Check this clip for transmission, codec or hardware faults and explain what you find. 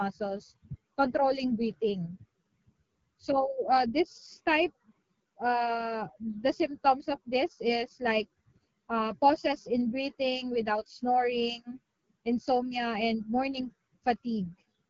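One codec fault runs through the whole speech clip: AMR wideband (HD Voice) coding at a low rate. From start to end the speech sounds rough and raspy, with nothing above 6.8 kHz. The harshness points to a low mode such as 8.85 kbit/s, where the vocal-tract model is too coarse to carry fine detail. The 6.8 kHz ceiling rules out narrowband AMR, which would stop near 3.4 kHz, and the rasp rules out a simple low-pass filter.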